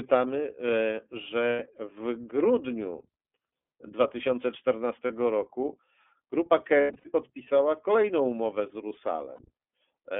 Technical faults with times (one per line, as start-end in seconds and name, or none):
0.00-10.20 iLBC codec
1.50-1.59 lost iLBC frames
5.06-5.11 lost iLBC frames
6.81-7.06 lost iLBC frames
9.36-9.40 lost iLBC frames